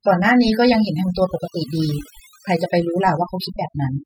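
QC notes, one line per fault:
Throughout: overdone noise removal, the denoiser is pushed so hard it clamps bands near the noise floor, leaving the background broken into twinkly specks.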